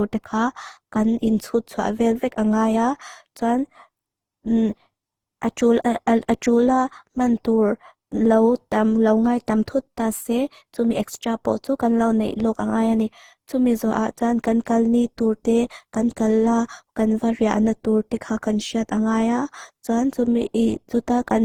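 Speech with generation loss throughout: swirly, hollow, smeared sound and blurred consonant attacks, likely from about ten lossy re-encodes consistent with Opus near 48 kbit/s. A spectrogram shows nothing above 20.2 kHz.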